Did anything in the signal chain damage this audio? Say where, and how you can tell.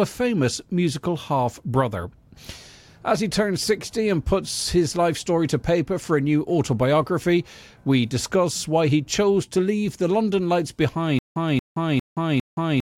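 Yes. From 11.19 s to the end, a stutter with silent gaps: a 231 ms burst repeats four times, each followed by 172 ms of digital silence, on a steady 404 ms cycle. This is likely a stalled playback stream replaying its last fragment on each retry, losing the audio in between.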